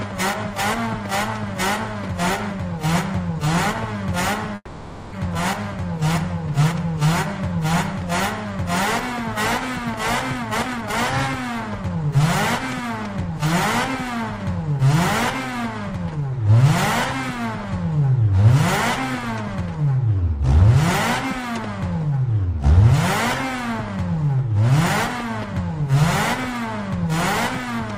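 From 4.55 to 5.14 s a call audio freeze is heard. The last sound carries on for about 570 ms as a fading buzz or hiss, with about 40 ms of near silence, then resumes exactly where it stopped. Unlike a dropout, nothing is skipped. This was likely caused by delayed packets draining the jitter buffer.

A jitter buffer speed-up follows, as the receiver trims pitch-period-sized pieces to shed the built-up delay: 10.35 to 10.94 s at 178% speed, removing roughly half a second; then 11.78 to 12.20 s at 112%; then 12.90 to 13.43 s at 105%. The pitch stays the same throughout, which is what tells it apart from faster playback.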